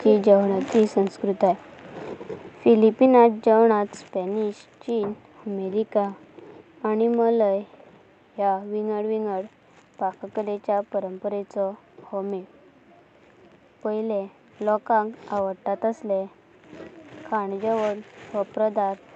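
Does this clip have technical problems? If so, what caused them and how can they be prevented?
Yes. Microphone volume stepped down at 3.06 s: the speech and the background both drop by about 4 dB at once and stay there. This is likely the call software's automatic gain control cutting the device's input volume after judging it too loud. Turning off automatic microphone adjustment and setting a moderate input level beforehand prevents it.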